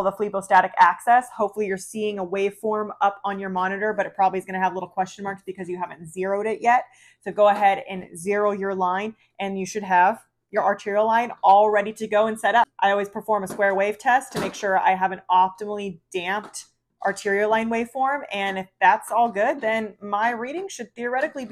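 No technical faults can be heard anywhere in the audio. Nothing in the signal path breaks down at any point.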